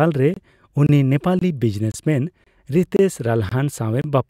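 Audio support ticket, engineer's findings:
Gap between chunks in the speech: hard-edged 25 ms silences at 0.34, 0.87, 1.39, 1.92, 2.44, 2.97, 3.49, 4.02 s. 0.5 s chunks joined with padding or late starts. Nothing lost, only interrupted.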